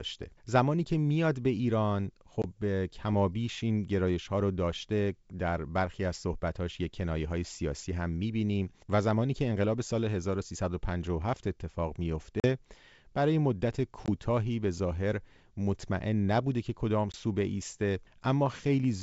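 Packet loss on an ADPCM call struck at 2.42, 12.40, 14.06 and 17.12 s. Each time the G.722 stream, which sounds wideband and clean, lost a packet or two and fell silent: about 20 ms of hard-edged gap, 40 ms at 12.40 s. The decoder's predictor and step size then fell out of step with the sender's, bringing back the speech with brief, slight distortion.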